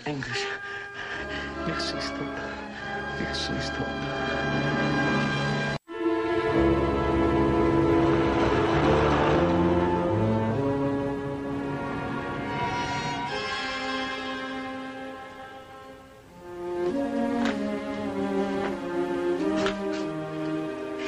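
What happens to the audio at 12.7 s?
Nothing goes wrong at 12.7 s; the audio plays through that moment intact, with no dropout, click or other fault.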